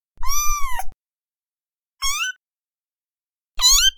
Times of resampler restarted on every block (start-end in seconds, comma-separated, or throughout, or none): 2.15-3.98